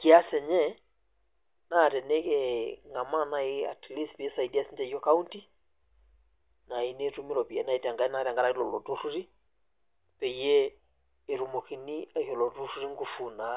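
No technical faults are audible anywhere in the speech.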